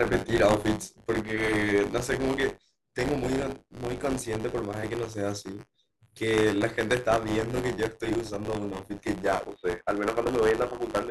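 From the start, buffer tearing gives the speech a steady robotic buzz at 100 Hz. Writer and reader overlap, so a small slice of each buffer repeats audio from about 20 ms earlier.

At 9.44 s a 20 ms silence falls. From there to the end the sound turns dull and boxy, with a narrower band. The level shifts by about 5 dB, and a faint new noise floor appears. This is likely an input switched to a poorer device.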